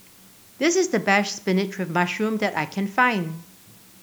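From start to finish the speech carries low bit depth with dither: a steady, even hiss sitting roughly 30 dB below the voice, which fits 8-bit quantisation with dither added before rounding. On a spectrogram it shows as a uniform grey noise floor across all frequencies; the waveform keeps a fuzzy baseline between phrases.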